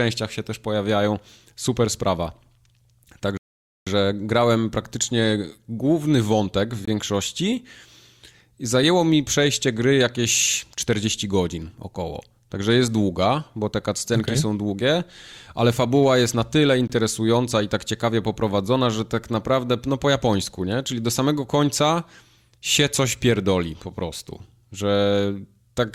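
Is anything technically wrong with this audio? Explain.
Yes. There are two kinds of fault in this speech clip.

A rebuffering stall runs from 3.37 to 3.87 s. The player exhausted its downloaded audio and paused until more arrived, inserting about 0.49 s of silence. Speech then resumes exactly where it stopped, just before "grałem praktycznie główny wątek", with nothing missing.

Gaps between chunks occur at 6.85 to 6.88 s, after "praktycznie główny wątek w", and at 16.88 to 16.90 s, after "fabuła jest na tyle". Each is a short hole of about 21 ms at the joins of 10 s chunks. The likely cause is padding or a late start at each chunk boundary.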